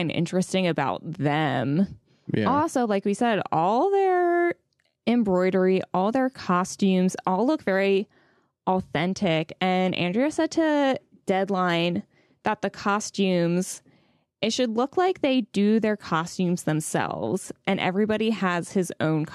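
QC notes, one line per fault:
Nothing stood out on listening.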